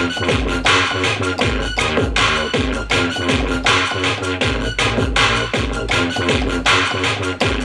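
Nothing is technically wrong with this audio; there are no faults to report at any point.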